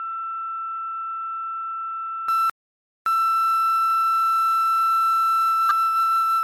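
From the start until 2.28 s the everyday sounds come through a narrower band at about 10 dB lower level, over a new noise floor far beneath them. The likely cause is the input switched to a poorer device. At 2.28 s the sound clears up again with no silent gap, unlike a dropout.

From 2.50 to 3.06 s comes a playback stall: the output goes silent for about 0.57 s, most likely because the player ran out of data or its thread was blocked. This gap sits in mid-flow, not at a change of tone like a device switch.

From 3.06 to 4.18 s a time-compressed catch-up follows. The player trims its backlog by cutting out small pieces and cross-fading the rest, so the audio runs at 1.5 times speed while its pitch stays normal. That is unlike a simple speed-up, which would raise the pitch.

At 5.69 to 5.72 s a corrupt frame decoded gives a brief glitch with the error peaking around -10 dBFS. Flipped bits in one compressed frame put energy at the wrong frequencies. 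It lasts about one frame.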